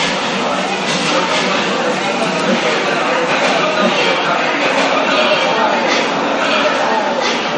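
From the start, a second full copy of the audio runs behind the first. It trails by about one and a half seconds and is roughly as loud as the original. Every event is heard twice, with no decay or room colour on the repeat. It enters abruptly rather than fading in. This doubled audio track likely comes from the signal being captured a second time through a slower path, or from an edit that leaves two copies out of step.

Throughout the clip, the audio also carries plainly audible MP3 compression artefacts. Nothing is present above 10.9 kHz, so the top end is sharply cut off. That cutoff fits a low bitrate of around 44 kbps. The encoder was starved of bits, so it dropped the treble and zeroed weaker frequency lines. Those lines flicker on and off from frame to frame. The result sounds watery and swirly, with smeared attacks and metallic chirps on bright, hissy sounds.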